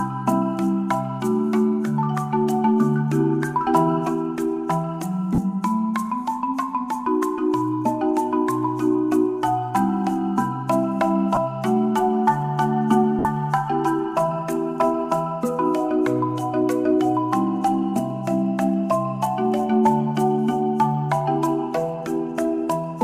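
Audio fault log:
5.35–5.38 s, 11.35–11.37 s and 13.19–13.25 s, lost LE Audio frames: three short dropouts of 30, 20 and 60 ms, which fits 10 ms frames going missing. The decoder fills each gap by replaying the last spectrum with scrambled phase, so you get a brief noisy smear.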